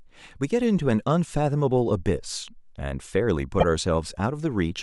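It's a speech clip with a short repeated-frames stutter at 3.59–3.64 s. About 26 ms plays twice, which points to a single compressed frame being duplicated, stretching the audio by 26 ms.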